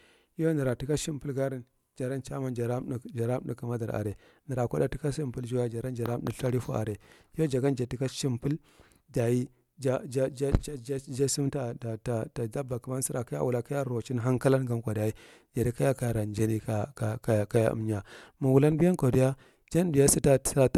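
No technical faults occur at any point in the recording, so there are none to describe in time order.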